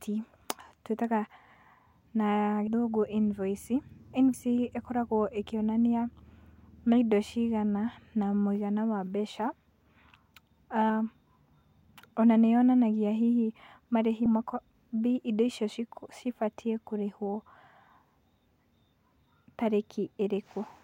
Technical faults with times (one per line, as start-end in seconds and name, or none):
2.67 compressed frames skipped
4.33 compressed frames skipped
14.25 compressed frames skipped